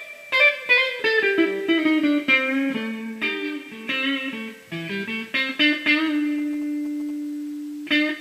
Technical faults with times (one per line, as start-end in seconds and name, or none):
5.69-7.11 GSM signalling bursts